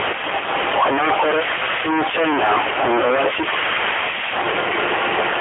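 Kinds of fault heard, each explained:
Stuck bit: There's a distortion riding on the speech the whole way through, and the gaps between phrases aren't clean either; they fill with a gritty noise floor. That points to a stuck bit as the likely cause. One bit in each sample is pinned at 0 or 1, so about half the values land off by that bit's weight. Tiny signals flip sign against it, which is why the pauses turn noisy.
AMR narrowband mobile codec: The speech has that unmistakable phone-call quality. It's confined to a 300 Hz to 3.4 kHz line band with nothing above 3.6 kHz, so it sounds boxy and dull. AMR-NB rebuilds the voice from a vocal-tract model driven by a few pulses per subframe, and the damage here is plainly audible. There's a synthetic, buzzy edge that fits the 7.95 kbps mode, a fairly low bitrate that leaves little detail to work with.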